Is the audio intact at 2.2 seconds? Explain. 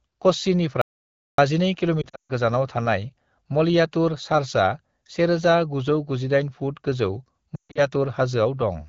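No. From 2.02 to 2.32 s the sound dips and fades out in brief gaps, then returns rough just before "गोजानाव थानाय मलयातुर चार्चआ". These are lost AMR speech frames: corrupted frames were concealed by repeating the last good parameters at falling gain, with runs up to 140 ms.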